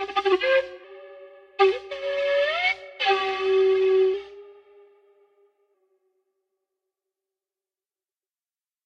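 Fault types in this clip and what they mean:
Drift correction step: From 0.32 to 0.84 s the sound runs 6.3% slow and drops about 113 cents, a little over a semitone, then snaps back. From 4.14 to 5.74 s it runs 6.3% fast and rises about 106 cents. Speed and pitch move together and hold steady for each stretch, which separates this from the continuous wobble of wow or flutter. The likely cause is clock-matching software briefly changing the playback rate to drain or refill its buffer.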